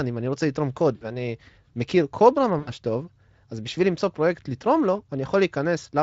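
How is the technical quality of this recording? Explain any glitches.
The recording has two short dropouts, both from VoIP packet loss concealed by the speech codec. The light codec texture throughout fits a Speex stream near 28 kbps.

The first dropout runs from 0.95 to 1.06 s and covers about 60 ms. The second runs from 2.59 to 2.72 s and covers about 80 ms. When packets went missing, the decoder kept repeating its last pitch and vocal-tract shape at falling gain. The speech smears into a brief buzzy tone or coloured noise that fades. Because each frame leans on the one before, the voice stays weak or distorted for tens of milliseconds after real audio returns.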